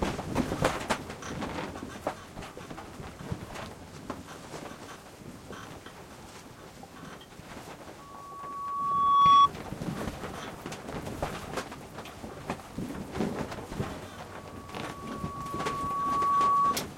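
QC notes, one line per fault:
7.99–9.49 s and 14.23–16.81 s, loudspeaker feedback squeal: a lone 1.1 kHz tone swells over a second or two to about 20 dB, then about 15 dB, above the sound. The mic's hearing its own speaker, with loop gain over one there.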